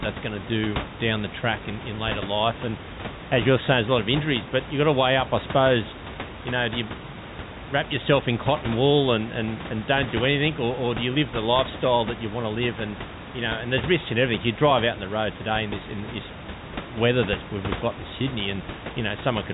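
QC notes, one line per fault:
Nothing stood out on listening to this speech clip.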